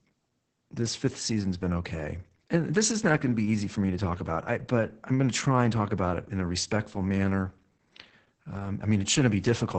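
Opus voice compression runs throughout: heavy SILK coding, consistent with a very low bitrate around 10 kbps, leaves the speech muffled, hoarse and robotic, with smeared, blocky harmonics on a spectrogram.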